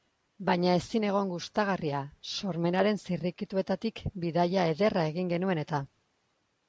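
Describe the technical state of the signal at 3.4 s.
At 3.4 s the speech signal is intact, with nothing wrong to be heard at that moment beyond the normal band limit of the call microphone processing, which leaves nothing above 8 kHz.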